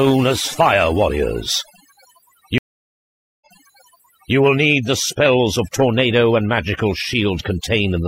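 A speech recording with overdone noise removal throughout: the background drops and breaks up into twinkling specks, showing on a spectrogram as a patchy, holed-out background with ragged band edges. At 2.58 s a stream reconnect cuts in: about 0.83 s of flat-line silence, then the audio resumes roughly 0.94 s earlier, replaying material before running on normally by 4.35 s.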